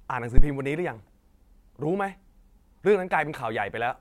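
At 0.38 s a phantom power thump hits this speech clip: a supply switched on or off on a live input sends a voltage step through the coupling capacitors, producing a deep thump peaking near -4 dBFS. Unlike a handling bump, it is a single step with a 12 ms decay.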